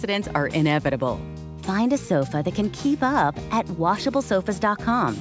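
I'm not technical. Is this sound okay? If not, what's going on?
Yes, nothing has gone wrong with this sound. It has come through an ordinary internet call line, which trims away the very highest tones above 8 kHz and gives it that slightly softer, phone-call quality.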